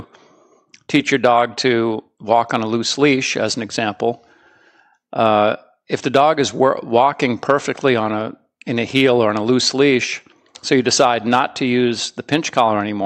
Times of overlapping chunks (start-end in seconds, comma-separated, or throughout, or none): none